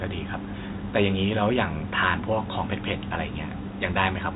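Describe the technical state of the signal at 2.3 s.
At 2.3 s the speech is intact, with no fault, only the G.711 telephone coding's band limit, leaving nothing above about 3.8 kHz.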